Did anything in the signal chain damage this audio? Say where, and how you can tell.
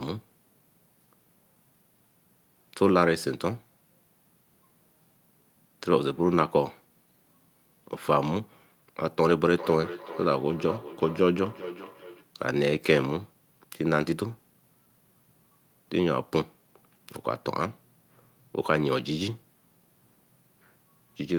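Yes. A feedback echo between two devices appears in the call-processing stage from 9.5 to 12.32 s. The speech comes back at a steady interval of roughly 400 ms, peaking about 14 dB below the direct speech. Two devices in the same room are on the call. One plays the other's audio aloud, and that microphone picks it up again. Each device's echo canceller removes only its own playback, so this loop passes through.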